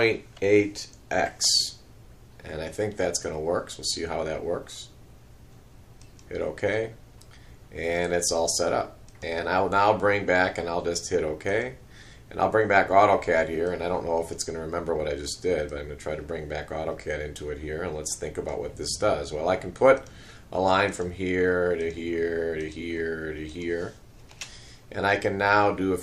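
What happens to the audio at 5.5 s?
Nothing goes wrong at 5.5 s; the audio plays through that moment intact.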